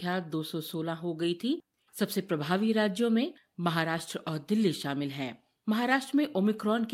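Nothing in the speech stood out as a technical fault on listening.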